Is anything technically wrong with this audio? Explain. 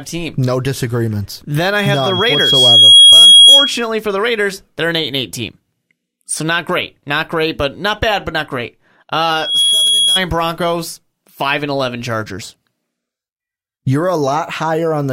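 Yes. Two bursts of loudspeaker feedback squeal intrude on the speech. From 1.75 to 3.87 s, a piercing tone at 3.3 kHz swells over about a second and a half until it sits roughly 15 dB above the speech. It cuts off just before "for the." A weaker burst follows "bad but not great," from 9.35 to 10.22 s. It rises in a fraction of a second and peaks only about 5 dB above the speech. Both squeals come from a microphone picking up its own loudspeaker, where loop gain above one at 3.3 kHz lets that frequency feed on itself and grow.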